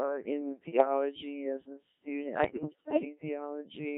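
Throughout the clip the speech has the buzzy, robotic quality of the Codec 2 vocoder, heavily damaged, which fits a rate around 1.3 kbit/s. The decoder rebuilds speech from sine waves driven by pitch, voicing, energy and a coarse spectral envelope, so no original waveform survives. That sets it apart from a starved transform codec: instead of swirly, watery smearing over a recognisable waveform, the timbre itself is synthetic, with a steady mechanical buzz on voiced sounds.

From 0.69 to 0.85 s come bit errors on digital voice radio, at a rate of roughly one bit in ten across a few frames. At such a low bitrate each flipped bit can reset a frame's pitch, level, voicing or spectrum, so the sound lurches into warbles and bleeps. The same fault returns from 2.44 to 3.05 s, just after "as a student", lasting longer and breaking into robotic gibberish. Packet loss differs: it leaves gaps or frozen, repeated sound, whereas here the stream keeps playing, but with wrong parameters.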